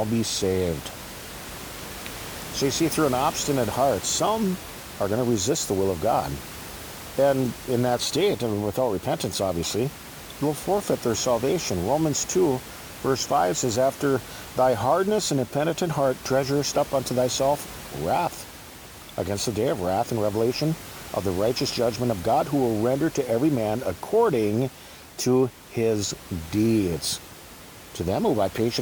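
Listening through this speech recording, nothing stood out as a technical problem; the room noise, sitting about 16 dB below the speech, is simply part of the space it was recorded in.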